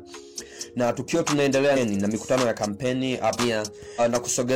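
Compressed frames skipped at 3.35 s and again at 3.95 s: whole frames, which fits a frame of about 46 ms, never reach the output, so the audio leaps ahead roughly 0.7 s, then about 0.4 s.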